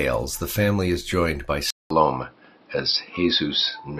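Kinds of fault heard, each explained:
Input switched to a poorer device: At about 1.70 s the sound drops out for 200 ms, then comes back duller and boxier, with nothing above 5.6 kHz, a level shift of roughly 5 dB, and a new noise floor sitting a few tens of dB under the speech. It stays that way to the end. That pattern points to the input likely being handed to a different, narrower-band microphone or a headset's call mode partway through.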